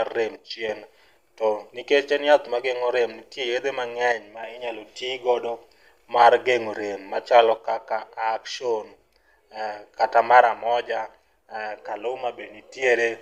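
One channel drops out four times, at 0.36 to 0.69 s, 4.12 to 4.43 s (just before "inyalo tigodo"), 7.57 to 9.97 s (just after "mar gend'o rem machalo") and 10.42 to 12.82 s. Each time the speech abruptly falls by about 6 dB, then snaps back at the end. That drop is what a mono fold-down gives when one stereo side goes silent, so the likely cause is a lost channel whose half of the sum is missing.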